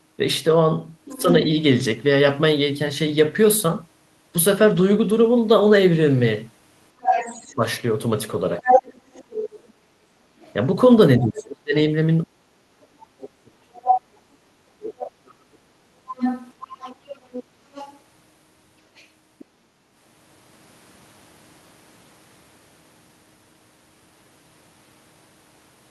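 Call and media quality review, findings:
Other side's voice leaking through, 1.05–1.22 s, 7.01–11.42 s, 13.88–14.01 s, 16.09–19.45 s: far-end speech audible, from about 20 dB under the talker to level with it. Likely residual loudspeaker echo the canceller missed.

Speech suppressed in double talk, 1.09–1.27 s, 7.55–8.69 s, 11.19–15.87 s: talker ducks during overlap, dips of about 15, 10, then up to 40 dB totalling some 3.3 s. Likely canceller confusing near-end speech with echo.

Background gated by the echo canceller, 9.73–10.08 s: room tone drops about 6 dB for roughly 0.3 s while loudspeaker plays, then recovers on release. Canceller clamping the mic.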